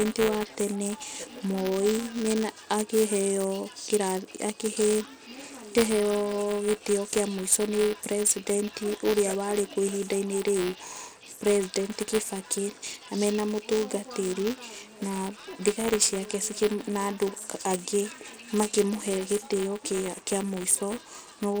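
From start to end, the speech carries gritty, coarse compression damage. The treble drops out, and the upper range sounds thin and grainy. This likely comes from Bluetooth SBC compression at a low bit pool, around 80 kbps, starving the top sub-bands of bits.

Buffer tearing runs through the whole clip too. A robotic buzz at 200 Hz rides on the speech whenever sound is present. The writer and reader of the playback buffer have drifted, so a small slice of each period replays audio from roughly 10 ms earlier, with hard joins.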